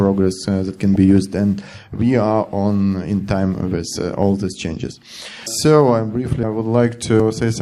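DAB burbling at 0.95 s: a brief moment where weak digital radio reception let bit errors slip past the error correction and into the MP2 audio data. The damaged samples put short blips of noise into individual sub-bands, and damaged scale factors make sub-bands leap in level, heard as a few watery blips laid over the sound. The brevity points to only a handful of corrupted frames, consistent with a low error rate of around a tenth of a percent.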